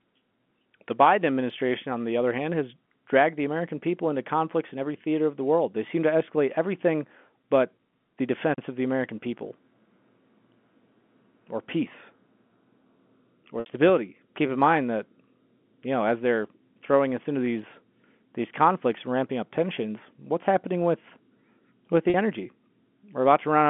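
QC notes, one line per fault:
13.60 to 13.66 s and 22.10 to 22.14 s, packet loss with pitch repetition. Two short gaps open in the speech, 60 ms and then 40 ms long. That fits about three and then two 20 ms packets. The receiver fills each gap by repeating the last pitch period and fading it out over about 50 ms. The 40 ms gap sounds like a brief held, buzzy tone. The 60 ms gap runs past the fade, so it thins almost to silence before the speech cross-fades back in.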